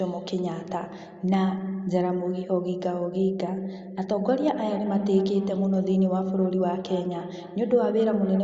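From 4.41 s onward, the speech returns roughly every third of a second, each pass thinner and more ringing, peaking about 14 dB below the direct sound. This is feedback echo between two devices: one replays the other's microphone feed, which picks it up again.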